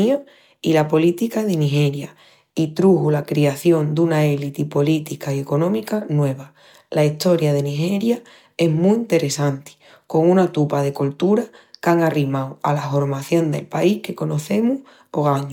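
No technical faults can be heard anywhere in this speech recording. There is no moment in the audio that calls for a time stamp or a closer listen.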